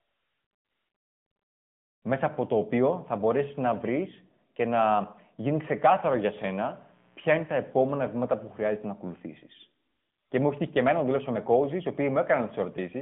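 Throughout, the speech carries AMR narrowband mobile codec damage: nothing above 3.6 kHz, a 150 Hz to 3.4 kHz line band, and plainly audible buzzy, synthetic coding consistent with the 10.2 kbps mode. From 5.59 to 8.69 s, a mains buzz on 60 Hz switching spikes adds a steady raspy hum, faint and well below the speech.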